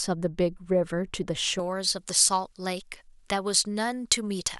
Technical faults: pre-emphasis left on

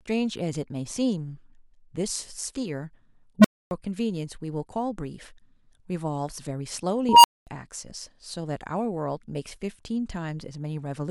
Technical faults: unstable filter

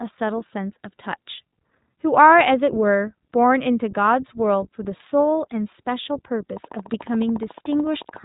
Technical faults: iLBC codec; train of clicks

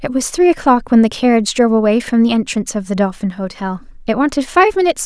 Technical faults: none

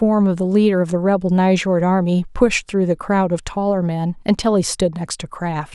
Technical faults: none

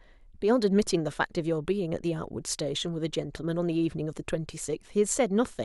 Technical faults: none

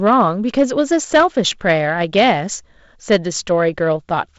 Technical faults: hard clipping

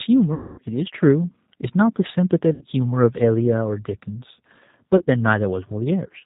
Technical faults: G.729 codec; VoIP packet loss concealed by the speech codec

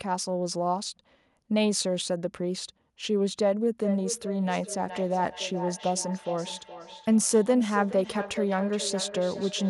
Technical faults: feedback echo between two devices

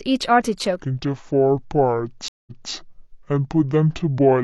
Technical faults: section at the wrong speed; stream reconnect

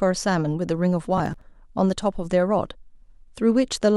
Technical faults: processor overload crackle

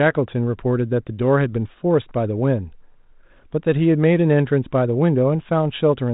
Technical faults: none

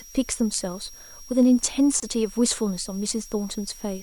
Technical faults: switching supply whistle; gap at a join of encoded pieces

